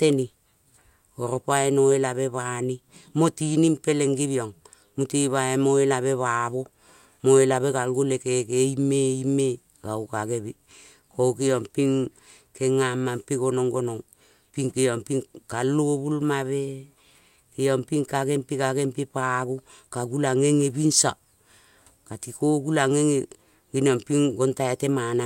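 Nothing in this recording trips any technical alarm; the speech just carries on its way with no dropouts, glitches or distortion turning up anywhere along it.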